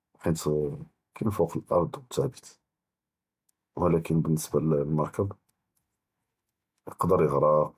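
Listening closely to this short speech recording, nothing technically amiss stood out anywhere along its length.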